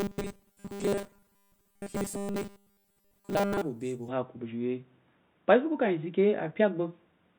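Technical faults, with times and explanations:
0.01–3.62 s, robotic sound from repeated short buffers: the speech becomes a rigid, metallic buzz pitched at 200 Hz, still roughly following the words. This likely comes from audio arriving too seldom, with most of the sound replaced by repeats of a 5 ms stretch, whose repetition rate sets the buzz.
4.09–7.39 s, input switched to a poorer device: the speech turns dull and boxy, with a level shift of around 5 dB and a faint new noise floor roughly 45 dB down, with no gap at the change. This likely reflects a mid-recording switch to a narrower-band input.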